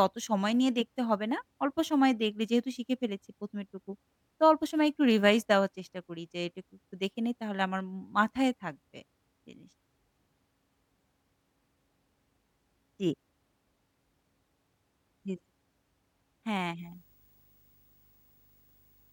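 From 16.79 s to the end at 19.12 s, a low buzz at 50 Hz rises under the speech, roughed up by a layer of hash, with a thin whine near 15.6 kHz riding on top, all sitting roughly 35 dB below the speech. This is video or display buzz: a screen or video cable coupling into the audio path, its 50 Hz field rate and its line-scan rate leaking in as audible tones.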